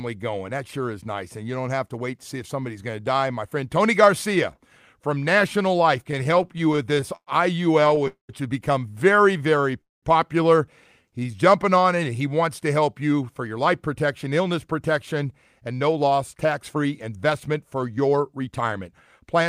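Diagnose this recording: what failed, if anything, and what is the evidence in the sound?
The speech drags and stutters from 6.11 to 7.29 s with 15 brief catches, the longest 106 ms, and again from 7.81 to 8.07 s with five tiny ones. These are repeated stalls (stutter) in the network and jitter buffer stage: late packets kept emptying the buffer, and the receiver stretched the last sound each time.

The audio stops for about 0.2 s at 8.07–8.31 s, fading to near silence for 130 ms before "has become". At 9.81–10.05 s it stops again for 210 ms of silence. This is call audio freeze, likely from packets held up on the network, leaving the jitter buffer empty until they arrived and playback resumed where it stopped.

After "has become", at 9.31–9.80 s and again at 11.03–11.83 s, the speech slows to 90% speed at unchanged pitch, with sounds drawn out. This jitter buffer slow-down comes from the receiver repeating single pitch periods, adding 56 ms and 84 ms to rebuild its reserve.

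From 13.47 s, after "to help you for", to 19.41 s the speech runs about 7% fast at the same pitch and sounds hurried. This is jitter buffer speed-up. The receiver trimmed short pitch-period pieces, around 0.4 s in total, to shed excess delay.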